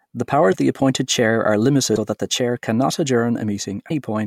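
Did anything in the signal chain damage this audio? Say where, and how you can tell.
Yes, at the codec. Brief garbled jumps occur at 0.51–0.54 s, 1.95–1.98 s and 3.88–3.91 s, each about one frame long. The likely cause is a broken MP3 bit reservoir.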